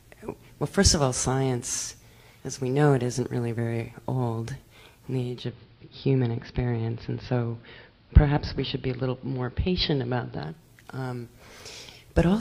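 Digital radio blending to analogue runs from 5.20 s to 10.71 s. The receiver lost its digital stream and cross-faded over about 0.3 s to the station's AM broadcast. The sound turns dull, drops about 1 dB in level, and carries a faint hiss roughly 40 dB below the signal. At 10.71 s it blends back to the full-bandwidth digital feed.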